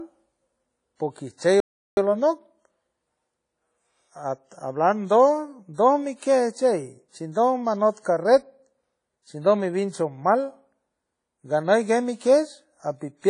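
From the start, the speech has a ringing, washy quality, with hiss that swells and fades along with the voice. This is likely WMA compression, which fits an early WMA encoder at around 32 kbps, where long transform blocks smear quantisation noise and weak components are dropped.

At 1.60 s the audio cuts to silence mid-flow for about 0.37 s, resuming at 1.97 s. This is a playback stall, likely the player running short of data or being blocked before it recovered.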